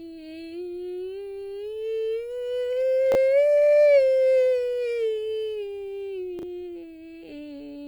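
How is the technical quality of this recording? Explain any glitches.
The music has two brief glitches, both chunks out of order. At 3.12 to 3.15 s, a 10 ms chunk plays two chunks late, so the music jumbles at three hard joins. At 6.39 to 6.43 s, a chunk arrives three chunks late, producing the same jumbled moment. On the waveform, both show abrupt discontinuities; on the spectrogram, they appear as thin vertical broadband lines.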